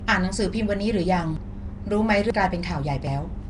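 Throughout the speech, a rough, hissy, underwater smear and nothing above 10.6 kHz point to Nellymoser compression, likely at a rate near 44 kbps, with weak bands noise-filled. At 1.37, 2.30 and 3.07 s, abrupt jumps, losing about 0.1, 0.3 and 0.15 seconds, are likely dropped buffers (overrun) joined without silence.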